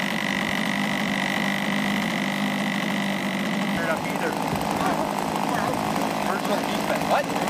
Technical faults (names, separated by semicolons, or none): damaged data in a compressed stream